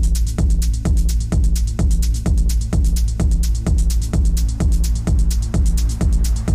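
From start to finish the sound suffers hard clipping: the signal was driven about 2 dB past what one stage could pass, so every peak above that ceiling is sliced flat, affecting roughly 7 percent of samples. The flattened tops add high harmonics, heard as a gritty crackle riding the louder moments. On the waveform the peaks sit squared off against a fixed level; a spectrogram shows vertical smears of energy reaching high up at each loud moment.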